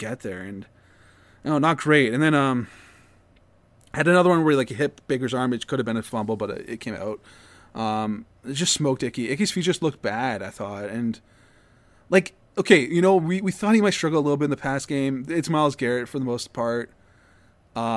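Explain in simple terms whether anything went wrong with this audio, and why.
Nothing went wrong here; no faults can be heard.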